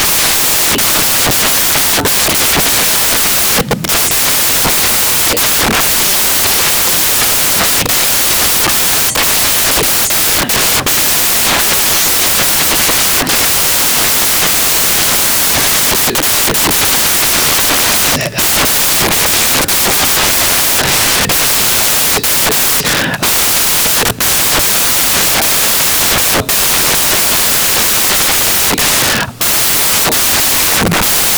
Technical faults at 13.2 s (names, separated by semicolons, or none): samples built from the wrong bytes